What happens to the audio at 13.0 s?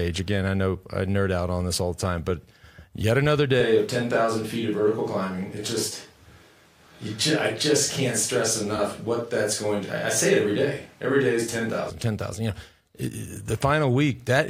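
Nothing goes wrong at 13.0 s; the speech there is intact, with no dropout, click, distortion or other fault.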